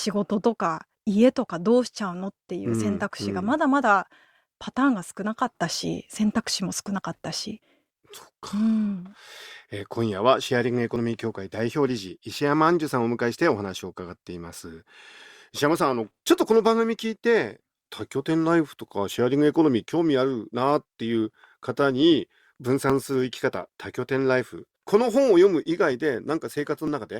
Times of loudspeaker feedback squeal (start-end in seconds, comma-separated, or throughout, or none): none